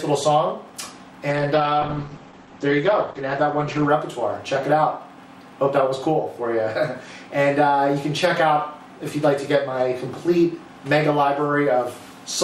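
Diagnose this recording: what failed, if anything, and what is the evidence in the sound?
A call bitrate drop, in the codec stage, driven by the call's bandwidth estimate. From 1.31 s to 3.95 s the encoder rate falls from 128 kbps to 11 kbps, holding its lowest for about 2.6 s. The coarser coding makes the sound rough, watery or muffled, and the coded bandwidth shrinks from 20 kHz to 8 kHz. On a spectrogram, everything above 8 kHz vanishes for that span and returns after 3.95 s.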